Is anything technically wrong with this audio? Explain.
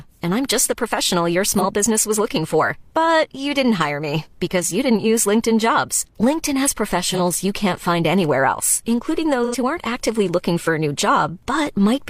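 Yes. Three brief smeared, noisy patches interrupt the speech: at 1.54 to 1.65 s, between "just the professional your" and "business was looking for"; at 7.13 to 7.20 s, just before "you can't find anywhere"; and at 9.44 to 9.56 s, between "find anywhere else including" and "who aren't actively looking". This is AAC frame loss with concealment. The decoder lost about 43 ms of data in the first two cases, which fits a single AAC frame, and about 85 ms in the third, which fits two frames. It filled each gap by reusing the last good spectrum, so those moments sound blurred and phasey instead of going silent.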